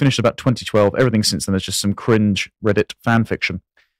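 From start to end, the loudest moments of the speech crackle with a gritty edge. This is hard clipping: the signal was driven about 8 dB past what one stage could pass, so roughly one to two percent of samples had their peaks cut flat, adding high harmonics.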